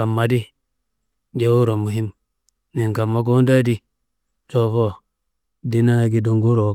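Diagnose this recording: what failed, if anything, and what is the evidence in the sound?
Nothing failed in this recording.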